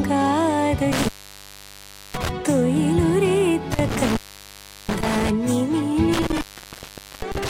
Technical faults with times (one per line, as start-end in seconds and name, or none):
0.92-2.29 intermittent contact
3.72-5.30 intermittent contact
6.13-7.49 intermittent contact